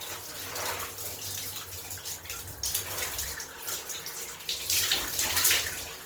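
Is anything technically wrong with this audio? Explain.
Yes. Throughout the clip there is audible Opus compression damage. The sound turns grainy and rough, with a noisy, hashy texture where tones should be clean. There is little of the swirling or hollow quality of MP3. The cause is likely a low-rate Opus encode in its music (CELT) mode. When bits run short, that mode fills starved bands with noise or copies of lower bands. The bandwidth stays full, with content up to about 20.3 kHz. The damage points to a rate near 24 kbps.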